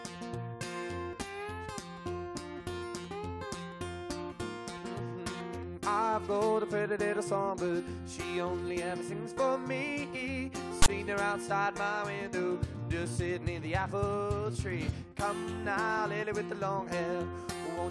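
At 10.82 to 10.88 s, file tags are played as audio. Text bytes read as samples give a loud, one-sided rasp. Zero padding then drops to silence.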